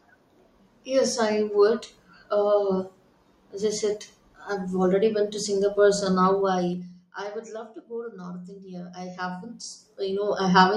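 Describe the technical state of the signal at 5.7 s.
At 5.7 s the speech signal is intact, with no audible fault at that moment.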